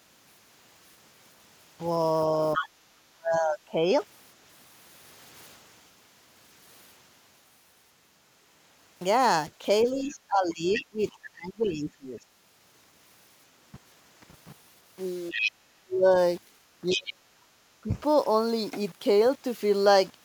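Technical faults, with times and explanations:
Throughout: low bit depth without dither. The audio sounds quantized to only seven bits with plain rounding, leaving an error floor about 30 dB below the signal. Because nothing decorrelates that error, it tracks the speech, making quiet syllables gritty and decays sputtery, likely from a reduced-resolution conversion. A waveform zoom shows visible stair-steps. The spectrogram shows broadband grain that rises and falls with the speech energy instead of a steady hiss.
2.54–2.69 s, 10.06–10.84 s, 15.31–15.51 s, 16.90–17.01 s: other side's voice leaking through. A second voice breaks through in short scraps, about 5 to 10 dB below the main talker. The longest stretch is near 10.1–10.8 s. The likely cause is loudspeaker playback of the far end that the echo canceller did not fully remove. The spectrogram shows a separate, weaker harmonic pattern overlapping the main one. 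The waveform shows small bursts.
2.56–3.88 s, 9.83–12.21 s, 15.31–17.93 s: speech suppressed in double talk. The main voice dips while the other side is talking. The drops reach about 25 dB, about 20 dB and about 40 dB in turn, covering roughly 0.7 s, 2 s and 1.5 s. The echo canceller likely could not separate the two voices and turned everything down. The waveform shows pinched or gapped envelopes. The spectrogram shows darkened bands.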